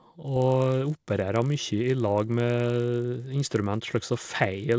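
A speech recording with a buzz running under the voice from start to finish, caused by the resampler restarting on every block during the conversion from 48 kHz down to 16 kHz. Each 20 ms block was converted in isolation, so every block edge carries a small error, and these repeat at 50 Hz. Unlike mains hum at the same rate, the buzz vanishes in the pauses and appears only while sound is present.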